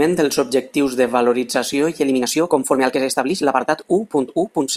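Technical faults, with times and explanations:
2.05 to 4.77 s, time-stretched section: the speech suddenly runs about 1.59 times faster while its pitch stays put, sounding rushed, likely from software compressing this stretch to fit a length by dropping short slices of the waveform.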